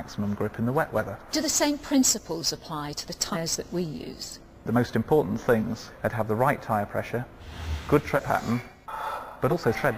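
At 3.32, 5.60, 8.15 and 9.50 s, compressed frames are skipped: one or two whole frames go missing, jumping the sound ahead by roughly 50 or 100 ms, which fits a frame of about 46 ms. Each join is heard as a sudden jump forward in the sound.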